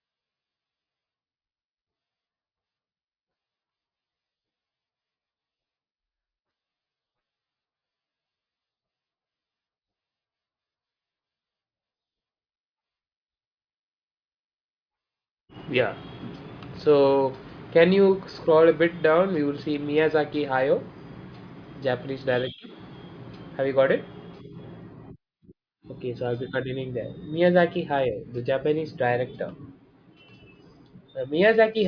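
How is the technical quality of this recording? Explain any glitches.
The technical quality holds up, with no glitches to explain anywhere in the recording.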